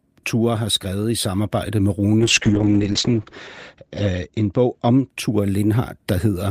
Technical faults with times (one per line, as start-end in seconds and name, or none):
2.21-5.15 call bitrate drop